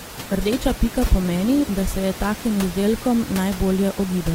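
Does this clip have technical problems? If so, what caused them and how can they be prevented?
Yes. For the first 2.0 seconds the speech sounds thin and smeary, with the top end either missing or replaced by a fizzy synthetic shimmer, then it snaps to full clarity with no gap. That's an adaptive stream starting at a low bitrate: the player grabbed a cheap rendition to start fast, which sounds like roughly 16 kbit/s Opus, then switched up to something around 64 kbit/s once it had measured the connection. The room noise, about 14 dB below the speech, is part of the recording rather than a fault. To prevent it, set the player to start on a higher rendition or buffer a little longer before playback begins.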